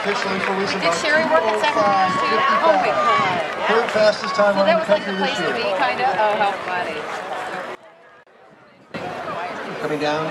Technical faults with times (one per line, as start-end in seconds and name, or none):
7.75-8.94 one channel inverted